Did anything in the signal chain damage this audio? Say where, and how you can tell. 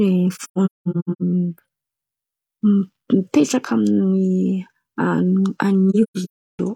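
Yes. AAC frame loss with muting at the codec stage: the speech drops into soft-edged silent holes scattered from 0.34 to 1.22 s and from 5.90 to 6.59 s, the longest a few hundred milliseconds. Zeroed frames fade through overlapping windows, leaving gaps.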